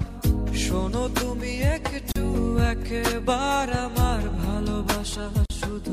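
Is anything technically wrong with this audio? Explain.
Yes. There are two gaps at joins of encoded pieces, at 2.12–2.16 s (about 38 ms) and at 5.46–5.50 s (about 44 ms). Each piece was encoded on its own and joined untrimmed, so one encoder's start delay and the other's last-frame padding both remain as silence. The continuous sound drops out with smeared edges, then resumes exactly where it stopped. A network dropout would lose material, but here nothing is missing.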